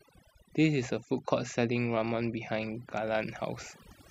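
Overdone noise removal runs through the whole speech clip. Noise reduction set too strong has pushed frequency bands close to its noise estimate down to nothing, taking quiet parts of the voice along. Between phrases the background drops and breaks up into twinkling specks.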